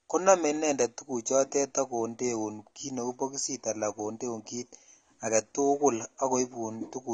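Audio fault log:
Throughout: AAC compression. The speech sounds dull and smeared, with a warbling, fizzy texture on sibilants and held sounds. The likely cause is AAC-LC coding at a low bitrate, consistent with 32 kbps, which forces a lowered cut-off and coarse spectral quantisation.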